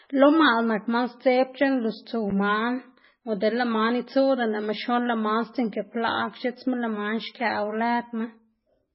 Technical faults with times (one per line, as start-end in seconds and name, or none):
0.00-8.95 MP3 compression